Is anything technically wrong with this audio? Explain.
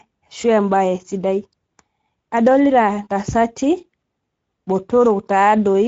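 Yes. For the whole clip the speech carries plainly audible Speex codec damage. Speex is a CELP coder that models the voice as a filter driven by an excitation signal. At this setting, which fits a bitrate around 16.8 kbps, that excitation is coarse, so the voice sounds hoarse and noisy. The band stops at 7.7 kHz, and its top is a shaped hiss rather than real detail. Unlike a simple low-pass, the damage lies inside the voice itself.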